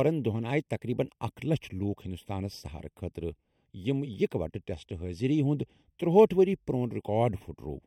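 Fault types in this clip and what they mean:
Channel delay (comb filtering): the speech sounds hollow and phasey throughout, with a fixed dip near 1.5 kHz and further notches spaced higher up. One channel lags the other by a fraction of a millisecond, so summing them to mono cancels those frequencies.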